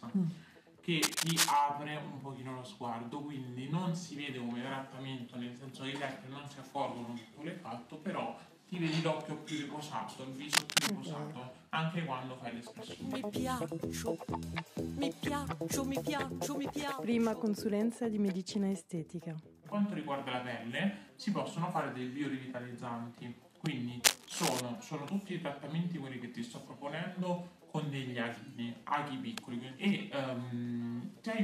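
Cable scratch noise appears at 1.02–1.56 s, 10.53–10.92 s and 24.04–24.61 s: brief bursts of dense, ragged scratching that sit a few decibels above the sound itself, most likely from a worn cable or connector being moved and its contact resistance fluctuating.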